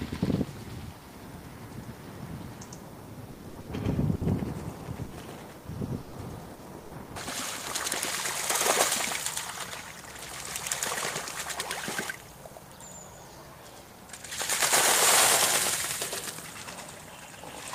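A doubled audio track runs throughout: a second full-band copy trails the original by roughly a tenth of a second at about equal loudness, with no decay or room colour, likely from a second, slower capture path or two misaligned copies in an edit. Repeated packet loss (robotic sound) hits from 3.31 to 4.24 s and again from 5.05 to 7.12 s. Short holes up to 120 ms are patched by stretching the preceding sound, covering about a third and then a quarter of each stretch, giving choppy audio with pieces missing.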